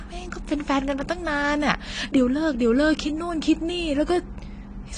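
Speech throughout, with plainly audible AAC compression damage from start to finish. Nothing reaches above 10 kHz, so the top end sounds dull and closed in. The highs are cut off hard rather than rolling away gently. Sustained sounds carry a warbling, swirly texture. Sibilants turn fizzy and smeared. The likely cause is low-bitrate AAC-LC encoding, which fits a rate of around 32 kbps. At that rate the encoder drops high bands and coarsely quantises what remains.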